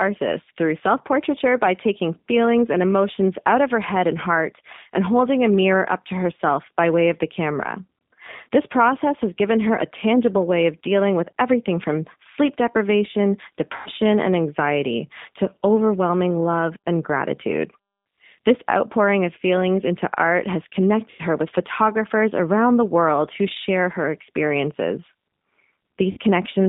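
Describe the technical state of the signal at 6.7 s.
At 6.7 s the speech sounds thin, slightly rough and synthetic, confined to roughly 150 Hz to 3.7 kHz. This is G.729 codec damage, present throughout: the voice is rebuilt from a vocal tract filter, pitch predictor and sparse pulses, which fits an 8 kbit/s link.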